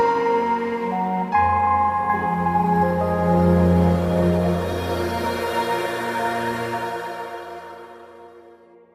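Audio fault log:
The audio shows no technical faults at any point. There is nothing here that needs a timed entry in the log.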